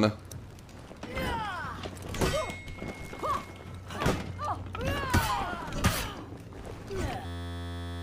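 From 7.26 to 8.02 s there's a system hang loop: an 11.61 ms slice repeats at 86.1 Hz, giving a steady buzz, which fits a 512-sample buffer.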